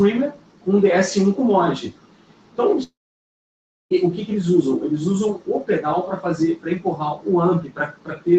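A speech-tuned noise suppressor stays active on this non-speech audio throughout. It treats sustained tones and decaying tails as noise, so the level swings by about 10 dB as held sound is pushed down while attacks pass through, giving a pumping, thinning character. The noise suppressor cuts sound hardest from 0.3 to 0.67 s, 1.89 to 2.58 s and 7.63 s to the end, with drops of about 11 dB that sink sustained parts and truncate decays. From 2.83 to 3.93 s the audio disappears for about 1.08 s, likely a long network dropout. Only the first few hundredths of a second carry a fading continuation of the preceding sound, then about 0.99 s of silence follows before audio resumes with that stretch missing. Throughout, the 8 kHz bandwidth of the call path caps the top end.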